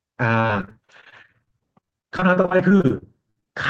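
A speech recording turns choppy and robotic from 0.41 s to 3.48 s, with dozens of brief holes, the longest about 60 ms. This is repeated packet loss: audio packets kept arriving late or not at all, and each gap was filled by stretching the last received sound, so about a quarter of that span is concealment rather than real signal. The sound was carried through a call codec whose 12 kHz bandwidth fits Opus.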